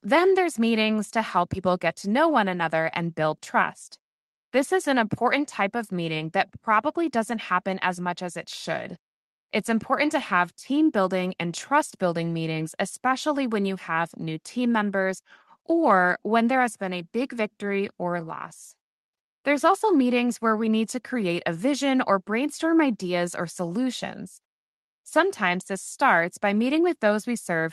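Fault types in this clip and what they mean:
No faults can be heard in this speech clip. It has passed through a working call path, and the top end stops at 12 kHz, consistent with Opus coding at a moderate rate.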